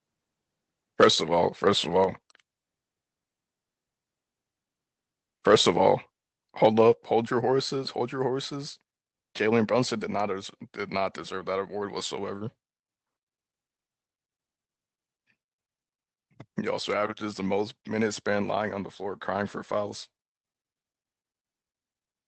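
A speech recording with two faults. Microphone overload flattens the peaks from 1.00 to 1.08 s and from 6.65 to 6.81 s. The first is harsher, about 7 dB over, clipping roughly one sample in twenty. The likely cause is a too-hot input gain. Microphone volume stepped down follows at 1.04, 2.04 and 6.93 s, by about 4, 3 and 5 dB. Level drops abruptly each time, likely from software gain control reacting to a too-loud or clipping input.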